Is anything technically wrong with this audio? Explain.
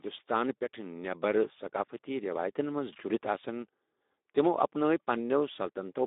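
Yes. Throughout, the speech carries Speex codec damage, consistent with a setting near 11 kbps. Too few bits for the excitation leave it plainly noisy and hoarse, band-limited to about 250 Hz to 3.7 kHz, with nothing above 3.8 kHz.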